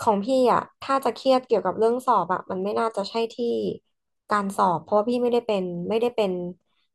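From 0.19 s to 6.92 s, faint clock slip clicks tick about ten times a second through the speech, likely from two unsynchronised clocks around 200 ppm apart, each slip a single sample.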